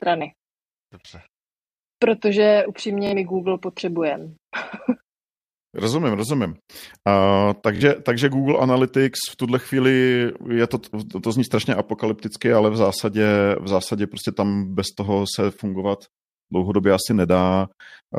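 Twice in this speech clip you get a Bluetooth stutter, first from 3.07 to 3.13 s and again from 7.76 to 7.82 s. Each time the receiver ran dry and kept replaying its last little buffer, so you hear a quick buzzy, machine-gun repeat lasting about 60 ms. When the audio picks back up it's jumped ahead by roughly 46 ms, which fits a couple of dropped packets rather than a simple delay.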